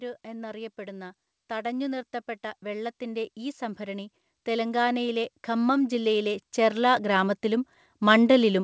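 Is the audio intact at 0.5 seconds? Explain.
No. At 0.5 seconds the automatic gain is rising, a drift that runs from 0.05 to 8.63 s. The control judged the input too quiet and keeps lifting its gain, so speech and background noise swell together gradually, unlike a fade-in or a sudden level jump.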